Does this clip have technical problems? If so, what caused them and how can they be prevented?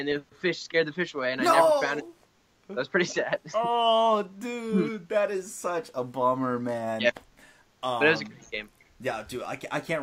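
No, nothing stood out as a technical problem on listening to this clip, so there is nothing here that needs preventing.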